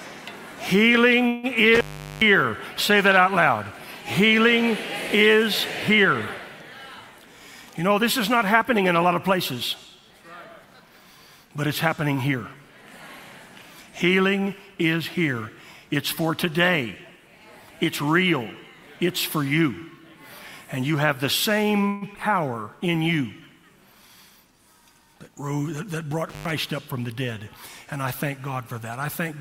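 At 1.27 s the sound stalls for about 0.16 s as a call audio freeze. The last sound is stretched into a fading buzz or hiss, and the audio then resumes exactly where it stopped. That points to packets that were likely delayed, not lost, so nothing is skipped, only pushed later.

From 1.75 to 2.22 s an intermittent contact opens for about 0.39 s. The sound drops out with crackle at both edges and faint hiss underneath. Unlike the freeze, there is no continuation of the last sound, just a dead line.

From 7.18 to 9.10 s a jitter buffer speed-up plays the audio at 109% speed. Short pitch-period pieces, roughly 0.15 s in total, are cut out to shed backlog. It sounds hurried while the pitch stays put, which separates it from a sample-rate error.

A second freeze runs from 21.88 to 22.04 s, filling about 0.14 s. Just after it, at 22.13 to 22.17 s, a short concealed packet loss drops 40 ms and patches only 10 ms. 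The result is a brief smear, with real sound actually missing rather than merely delayed.

A second speed-up, at 113%, runs from 23.95 to 24.74 s and removes about a tenth of a second. A second intermittent contact cuts out from 26.29 to 26.51 s, open for about 0.11 s, with the same edge crackle.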